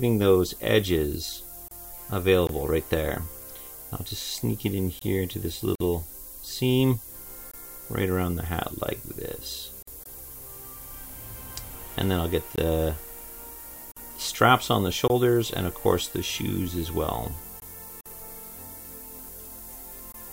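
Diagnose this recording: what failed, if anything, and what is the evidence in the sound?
Sample-format conversion: a steady, thin hiss sits only about 10 dB below the sound for the whole clip and climbs sharply toward the top of the band. This is low bit depth with noise shaping, consistent with about 7 bits, where rounding error is pushed upward in frequency. Plain dither would give flat, even hiss instead.

Codec stage: there are gaps at joins of encoded pieces near 1.68, 5.75, 9.82, 13.92 and 18.01 s, roughly every 4 s. The first lasts 30 ms and the rest 49 ms, with smeared edges. Separately encoded segments kept their encoder delay and final-frame padding when joined, and the sound resumes exactly where it stopped.

Buffer or playback stage: gaps between chunks appear at 2.47, 4.99, 7.51, 10.04, 12.56, 15.08, 17.60 and 20.12 s, every 2.5 s. Each lasts 21 ms with no lost sound. Their shorter, fixed length and separate 2.5 s rhythm set them apart from the 4 s codec joins.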